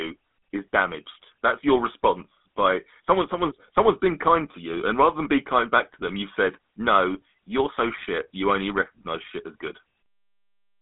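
From start to finish the speech carries GSM full-rate codec damage, and it is plainly audible. The codec rebuilds the vocal tract from a filter model driven by a sparse, regularly spaced pulse excitation, which gives the voice a buzzy, gravelly edge, consistent with 13 kbps GSM full rate. The line band sits at roughly 200 Hz to 3.6 kHz. A spectrogram shows a hard ceiling with nothing above 3.8 kHz and coarse, smeared harmonics beneath it.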